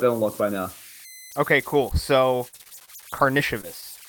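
It's a short speech clip, and there's a thin whistle, something like 2 kHz, sitting under it the whole way through, with grainy noise about 21 dB below the speech. That's converter idle tones: a delta-sigma converter running without dither gets stuck cycling through repeating bit patterns when the input is small. Those patterns come out as a steady tone, most obvious in the quieter moments. Then from 2.39 to 2.90 s the speech goes choppy and robotic, with repeated packet loss. There are about half a dozen holes, the longest around 42 ms, and roughly 28% of that half-second is patched audio. The receiver keeps papering over each gap by extending the last bit of sound, but the next gap arrives before things recover, so you get that broken-up texture with bits missing. After that there are two isolated blips of short concealed packet loss, at 3.38 to 3.41 s and 3.61 to 3.65 s. Each is a small chunk, roughly 20 ms, that didn't reach the decoder in time. 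The decoder bridged it by continuing the preceding sound and crossfading back into the real signal, so each one comes across as a quick smear or little wobble rather than a clean dropout.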